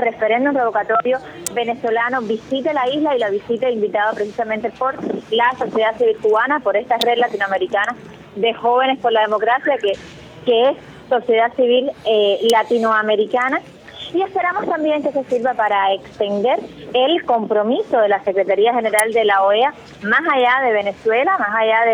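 Something switching nearby, likely a relay, motor or static discharge, put brief electrical arcs onto the audio line, producing an electrical switching spike at 1.47, 7.01, 12.50 and 18.99 seconds. Each event is only a few milliseconds long but jumps sharply in level, so it sits on top of the sound as a hard, dry snap, sometimes a tight little cluster of clicks.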